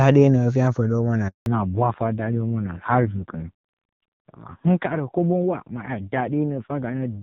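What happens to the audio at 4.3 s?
At 4.3 s the audio is inside a fallback to narrowband that runs from 1.46 s to the end. The call has dropped from wideband to a low-rate narrowband codec, which fits AMR-NB near 5.9 kbit/s. Nothing above 4 kHz remains, so the speech sounds duller and rougher than the clear wideband section before 1.46 s.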